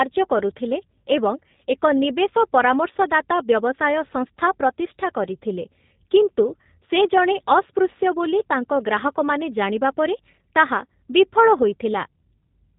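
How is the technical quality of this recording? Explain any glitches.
The recording has clearly audible low-bitrate codec damage across its full length, consistent with G.729 (the G.729A variant). Nothing reaches above 3.8 kHz, leaving the speech band-limited and dull. The codec rebuilds each 10 ms frame from a vocal tract filter, a pitch predictor and a few pulses, so speech comes through slightly rough and synthetic. The sound fits an 8 kbit/s stream.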